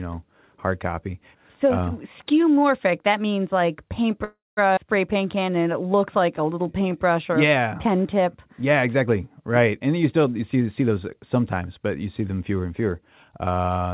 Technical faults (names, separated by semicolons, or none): call audio freeze; skip ahead; jitter buffer slow-down; jitter buffer speed-up